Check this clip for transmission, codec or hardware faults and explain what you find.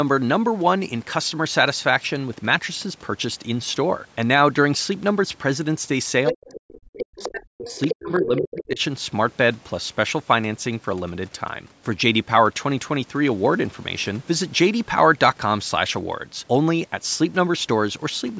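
Two related problems turn up together, both between about 6.3 and 8.8 s, and both point to a call with loudspeaker echo that the canceller couldn't handle. The call's microphone processing is audible too, with nothing above 8 kHz, but that's normal.

Other side's voice leaking through: a second voice pops in at 6.26 s (a brief scrap), again from 6.48 to 7.28 s, and once more from 7.66 to 7.95 s. It's loud, sitting only around 5 to 10 dB under the main speech. The likely cause is the far end playing on the talker's loudspeaker, getting back into the mic, and not being fully subtracted by the echo canceller.

Speech suppressed in double talk: right as that leak overlaps, the main talker gets pushed down hard, from 6.31 to 7.78 s and again from 7.94 to 8.8 s. That's roughly a second and a half plus under a second of affected speech, with the deepest dips around 40 dB, so parts practically vanish. 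Most likely, with both sides talking at once, the canceller couldn't tell its own talker from the echo and clamped down on everything.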